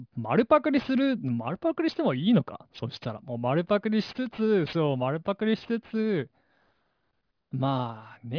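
Speech with aliasing throughout: sibilants sound gritty, with faint tones folded back below 5.5 kHz, which suggests an unfiltered drop to 11 kHz sampling. Simple band-limiting would sound dull rather than metallic.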